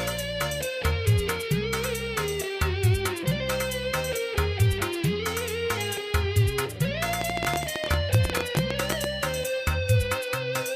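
From 7.22 s to 9.05 s a train of clicks runs over the sound: around thirty sharp ticks of much the same shape, arriving at an average of 13.1 per second but with uneven spacing. The peaks stand roughly 20 dB above the surrounding signal, so the ticking cuts through clearly, including any quieter moments. The cause is likely interference from nearby equipment or a faulty connection or power supply injecting pulses into the signal path.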